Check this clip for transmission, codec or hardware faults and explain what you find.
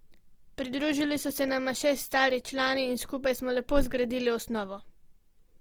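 One codec fault runs through the whole speech clip: Opus compression, likely in its CELT music mode, with plainly audible roughness and grainy, noise-filled bands, which fits about 24 kbps, though bandwidth stays full to 20.2 kHz.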